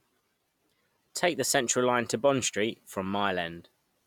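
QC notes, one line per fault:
No faults turned up on this one, so there's nothing to log here.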